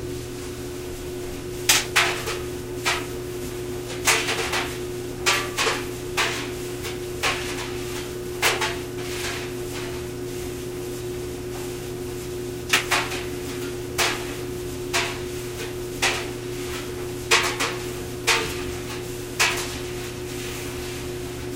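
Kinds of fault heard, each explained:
No technical fault can be heard anywhere in this recording of sounds. Listening through it turns up nothing that calls for a fault to be listed.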